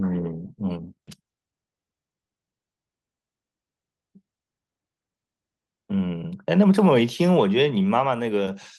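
At 1.07 to 1.09 s a skip ahead drops roughly 0.7 s of speech with no fill. The waveform splices straight across, and the spectrogram shows an abrupt, mismatched seam.

From 1.21 to 2.67 s a jitter buffer speed-up trims about a fifth of a second of pitch periods. The speech runs 113% fast at unchanged pitch, and the spectrogram shows a compressed, harmonic-preserving stretch.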